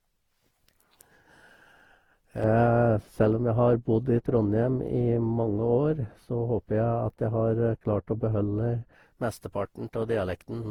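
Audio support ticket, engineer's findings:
Swirly, smeared, hollow throughout; blurred attacks. Likely generation loss from repeated lossy re-encoding, about seven passes. Fits a 48 kbit/s Opus chain.

2.44–8.94 s: dull, muffled, smooth treble roll-off, about 11 dB down at 10 kHz. De-emphasis applied wrongly, a treble cut without matching pre-emphasis.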